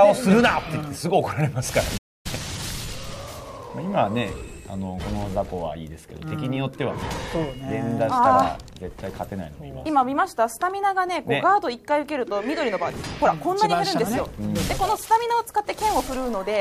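At 1.97 s the audio cuts out abruptly into silence and does not return until about 2.26 s, a gap of roughly 0.27 s. This is a playback stall, likely caused by the player running short of buffered data or its output thread being held up, so nothing reached the output until it caught up. On a waveform it shows as a flat line between two hard edges; on a spectrogram, a clean vertical band of nothing across all frequencies.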